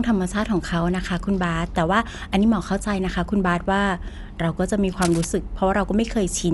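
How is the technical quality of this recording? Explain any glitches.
Quality is noticeably compromised: the speech is dull and coded-sounding throughout, and there's one short glitch near the end.

Throughout, there's nothing above about 11.5 kHz, and there's a rough, fluttery haze around the voice. That's likely Dolby Digital compression at a low bitrate, something like 64 kbps. The encoder narrowed the band and starved many frequency lines of bits, leaving dither noise to fill them in.

From 5.01 to 5.26 s there's a burst of scratchy, rustling noise, fairly loud and sitting not far below the speech. It's likely cable scratch noise: a worn cable or connector shifting, its contact resistance jumping around and spitting uneven noise into the signal.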